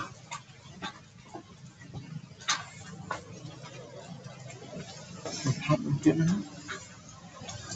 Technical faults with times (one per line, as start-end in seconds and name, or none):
1.00-1.21 sound cut by the noise suppressor